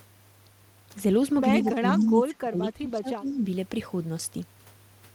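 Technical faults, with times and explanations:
1.63 to 3.47 s, speech suppressed in double talk: the speech sinks well below its normal level, at its deepest by around 25 dB, for roughly a second and a half in total within this span, then comes back up. This is likely an echo canceller reacting to both ends talking at once. Unable to tell the near talker apart from loudspeaker echo, it turned everything down, taking the wanted speech with it.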